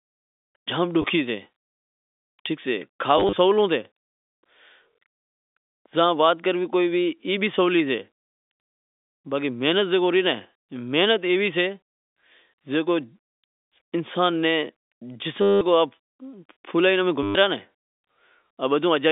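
A speech recording carried over a G.711 telephone line, band-limited to roughly 200 Hz to 3.6 kHz, with short robotic stutters at 1.02–1.04 s, 3.18–3.36 s, 5.21–5.37 s, 15.42–15.61 s and 17.23–17.35 s. Each has a buzzing texture near 100 Hz. The cause is packet loss with last packet repeated: the receiver replays the previous fragment to fill each gap, and those joins fall out of step with the pitch. The buzz rate fits 10 ms packets. The 3.18 s burst is scattered, with gaps no longer than 30 ms, while the others are solid runs up to 190 ms.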